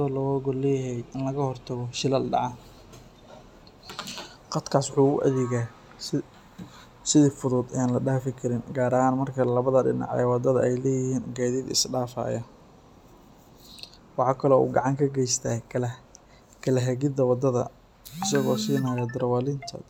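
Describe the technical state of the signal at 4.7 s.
At 4.7 s the signal is intact, with no audible dropout, distortion, glitch or other technical fault at that point.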